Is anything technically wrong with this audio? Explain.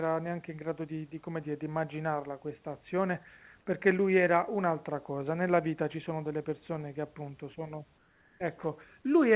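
Yes. From 7.98 to 8.4 s the room background turns to flat, featureless hiss about 2 dB quieter. This is likely comfort noise in place of the background: the sender stopped transmitting during silence, and the receiver synthesised filler noise. Unlike a dropout, the gap never goes fully silent.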